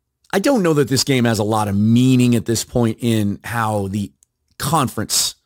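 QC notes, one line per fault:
Throughout: crude rate conversion. A gritty, inharmonic fizz follows the speech's louder and brighter moments, roughly 20 dB below it. Samples were repeated rather than filtered, in a cycle that fits a 44.1 kHz to 48 kHz change, creating shifted, non-harmonic copies.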